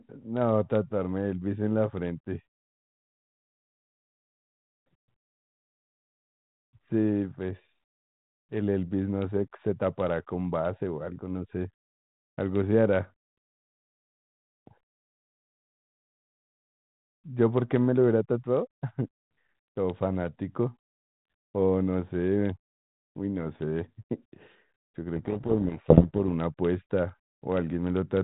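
Speech carried over G.726 ADPCM at 32 kbit/s, band-limited below 4 kHz with light coding hiss, breaks up from 25.16 to 26.19 s: a codec payload misread buries it in harsh distortion, which points to the decoder reading G.726 code words in the wrong bit order.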